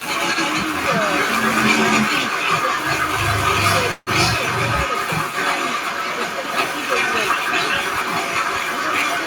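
Right at the start, 0 to 0.05 s, the speech dips by around 10 dB for a moment, likely speech suppressed in double talk as the echo canceller ducked both sides. Through the whole clip there's an echo leak: a delayed copy trailing about 364 ms behind, strong, about 5 dB above the speech, likely the far end's canceller letting loudspeaker pickup through. From 3.91 to 4.10 s there's a call audio freeze, with a fading buzz or hiss fill and about 30 ms of silence. It's likely a jitter buffer running dry, adding roughly 154 ms of delay without losing any audio.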